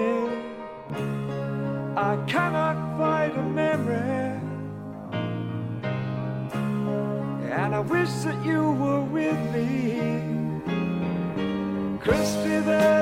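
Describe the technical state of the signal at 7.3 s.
At 7.3 s the signal is intact, with no audible dropout, distortion or other technical fault at that moment.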